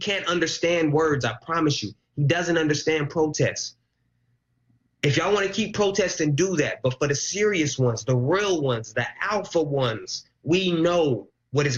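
No technical faults can be heard anywhere in the recording. Nothing in the sound calls for a note of any dropout, glitch or distortion.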